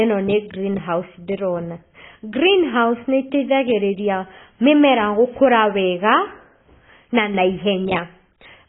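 From start to finish, the speech has nothing above 3.8 kHz and carries a heavy warbling, smeared texture, likely AAC compression at a very low bitrate, around 16 kbps. A simple low-pass filter would dull the sound without adding the fizzy, watery smearing on sibilants.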